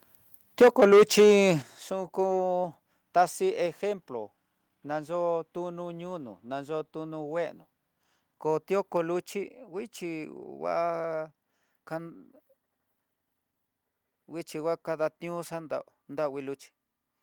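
Microphone overload, likely from an input level set too high, drives the speech in this clip about 9 dB past the converter's ceiling between 0.6 and 1.51 s. The tops of the loudest waveform peaks are sheared flat, with around 15 percent of samples pinned at the limit. The result is a harsh, crackling, buzzy edge on the syllables in that stretch. The software then likely reacted to the excessive level with a microphone volume step-down, cutting the device's input gain in abrupt single steps rather than smooth fades. Voice and background drop together by about 2 dB at 0.62 s, about 7 dB at 1.62 s, about 4 dB at 3.66 s, and about 2 dB at 8.97 s, just after "ko ti'ó". The 1.62 s cut, following the distorted burst, is the largest of the four.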